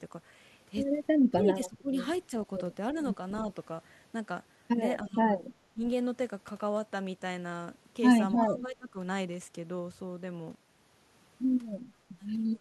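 Between 1.3 and 1.92 s, 5.02 and 5.24 s, 5.74 and 5.81 s, and again from 8.48 to 8.97 s, the speech dips by as much as about 20 dB in the first stretch and about 15 dB in the others. This is speech suppressed in double talk, most likely an echo canceller ducking the near talker while the far side was also active.

Just before the last of those dips, from 8.38 to 8.44 s, a short scrap of the voice returns about 0.3 s late and only about 5 dB below the speech. This is echo leak: likely a loudspeaker-to-microphone path the canceller failed to fully remove. It is told apart from room reverberation by that distinct, fixed delay.

From 10.55 s to the end, the level collapses by about 33 dB and what remains is faint. This is one channel inverted, where reversed polarity on one side likely cancels the shared centre content when the stereo is summed to mono. A level fade would keep the full tone, whereas this leaves only the small mismatch between the channels.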